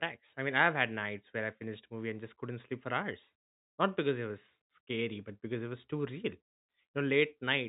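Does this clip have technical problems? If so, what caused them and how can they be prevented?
No, there are no technical problems in this speech.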